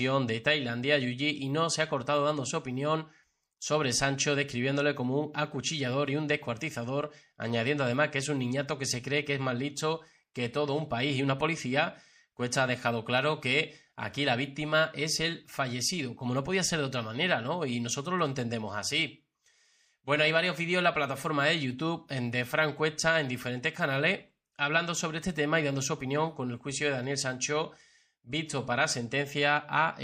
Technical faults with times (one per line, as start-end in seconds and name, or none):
0.00-30.03 MP3 compression